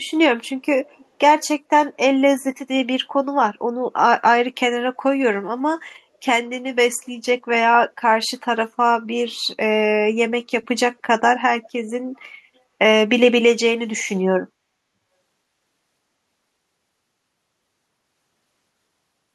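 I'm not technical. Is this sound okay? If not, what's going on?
No. There's echo leak at 0.86 to 1.05 s and again at 12.16 to 12.20 s: a faint copy of the speech returns about half a second later, likely because one caller's loudspeaker was picked up by their microphone and the echo canceller missed it.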